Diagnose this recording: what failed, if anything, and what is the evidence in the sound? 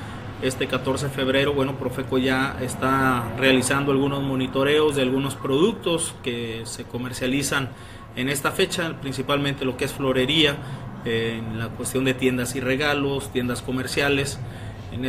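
Nothing in the recording points to a failure at any stage, from the analogue wiring through to playback. No event in the sound calls for a diagnosis, so there is no evidence or mechanism to report.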